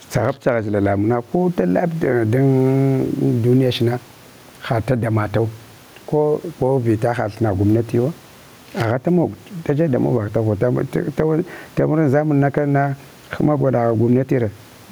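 Gain pumping throughout: input gain likely far too high makes a fast limiter duck loud speech, with the gain swinging about 10 dB.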